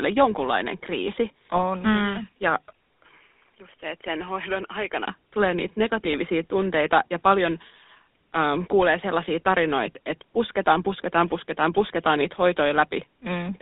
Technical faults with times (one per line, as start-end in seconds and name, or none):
0.00-13.61 GSM full-rate codec
1.56-1.59 GSM bit errors
2.72-5.07 input switched to a poorer device
6.04-6.13 GSM bit errors